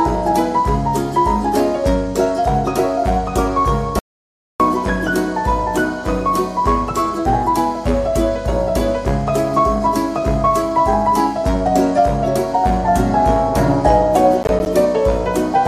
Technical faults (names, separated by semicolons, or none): audio dropout to silence; processor overload crackle